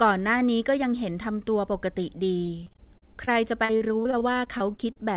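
From 2.46 s to 4.99 s the speech turns choppy and robotic, with about twenty brief holes, none longer than 40 ms. This is repeated packet loss (robotic sound): packets kept going missing, and each gap was patched by extending the previous sound, covering 18% of that stretch.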